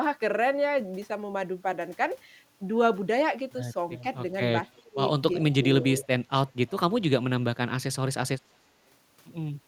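Just before 4 seconds, from 3.95 to 4.03 s, a faint delayed copy of the speech slips in, lagging by about 343 ms and sitting about 20 dB under the main speech. That's an echo leak, likely from a far end on loudspeaker whose echo canceller didn't fully strip what its mic caught, so the leftover came back down the line. It happens again at 4.68 to 4.82 s, much quieter this time at about 35 dB down, same delay.

Right after that, from 4.83 to 4.99 s, the speech itself sinks hard, at its deepest by around 30 dB. That's speech suppressed in double talk. Most likely, with both ends talking at once, the canceller couldn't tell the local talker from the loudspeaker echo and pulled everything down, so the speech briefly drops away.

The echo leak returns at 5.40 to 5.55 s, back up to about 20 dB below the speech, with a delay of around 344 ms.

The double-talk suppression then hits twice more. From 5.59 to 5.87 s the speech dips by about 10 dB, a sag rather than a dropout. 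From 6.03 to 6.10 s there's a short pull-down of about 15 dB.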